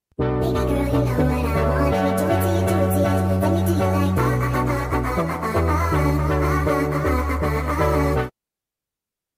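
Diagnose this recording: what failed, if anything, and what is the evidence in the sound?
Nothing in the recording stood out on listening that would point to a failure at any stage of the chain.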